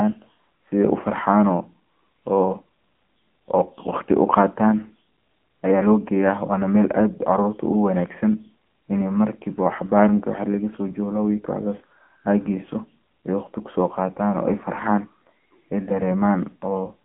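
Throughout, AMR narrowband mobile codec coding: speech sits within 200 Hz to 3.4 kHz, nothing above 3.7 kHz, with buzzy synthetic texture that a plain low-pass lacks, suggesting roughly 8 kbps.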